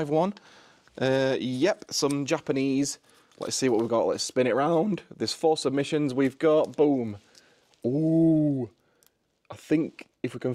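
No technical faults can be heard anywhere in the clip.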